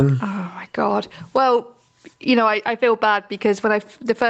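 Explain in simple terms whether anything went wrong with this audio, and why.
Gain pumping runs through the whole clip. Loud and soft parts end up closer in level and the sound is squashed, likely from the microphone level being set far too high.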